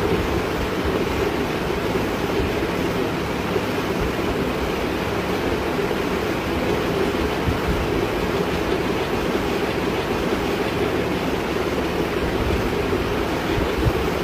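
At 9.71 s the audio jumps back and a stretch of just under a second plays a second time, running to 10.68 s, with a small blip marking the point where playback snaps backwards. The passage is a stream segment repeated: the player fetched or queued the same chunk of the stream twice, so the same material was handed on again in sequence, adding about 975 ms to the running time.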